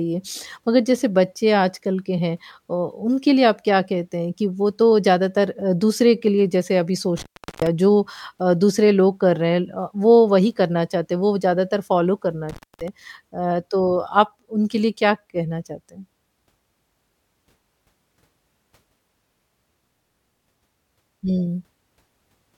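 Speech drops out twice from intermittent contact, a loose cable or plug briefly opening. The gaps run 7.17–7.67 s and 12.49–12.88 s, with crackle at each edge.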